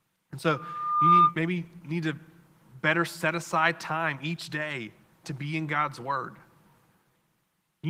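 From 0.47 to 1.35 s a loudspeaker feedback squeal builds at 1.2 kHz. The microphone picks up its own loudspeaker, the loop gain at that frequency exceeds one, and the tone swells over roughly 0.7 s to around 10 dB above the speech. A spectrogram shows a single horizontal line brightening.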